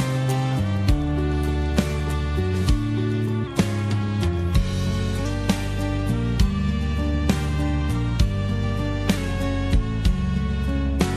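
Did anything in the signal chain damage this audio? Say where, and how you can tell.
Yes. A drift correction step, likely at the driver buffer, slows playback 6.25% at 3.47–5.25 s and from 9.17 s. Spectrogram harmonics drop 112 cents, snapping back at 5.25 s.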